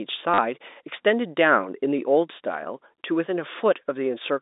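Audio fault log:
0.34 to 0.38 s, packet loss with last packet repeated: about 40 ms of audio goes missing, and the receiver fills the gap by replaying the last packet it had until fresh ones arrive. The short run takes on a brief robotic stutter, which fits a few 10 ms packets lost in a row. The band-limited telephone sound of the G.711 line stays intact around it.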